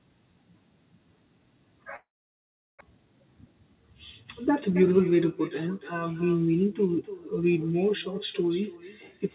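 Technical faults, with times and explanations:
Throughout, echo with no canceller: every phrase returns roughly a third of a second later at about 14 dB down, thinner, because the far end's loudspeaker feeds its open microphone uncancelled. A spectrogram shows each speech band repeated as a fainter, delayed ghost, with energy capped at 4 kHz by the narrowband call path.
1.96 to 2.83 s, long network dropout: the last sound is stretched into a fading buzz, then near-silence for about 0.73 s before speech resumes with a chunk missing. This is likely a stretch of packets that never arrived. The waveform collapses to a flat line, and the spectrogram shows a smeared, decaying band followed by an empty gap.
2.9 to 5.14 s, jitter buffer speed-up: speech runs about 9% fast at unchanged pitch, sounding hurried, as the receiver trims short pitch-period slices to shed roughly 0.2 s of built-up delay. 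Spectrogram harmonics stay level while syllables and pauses compress in time.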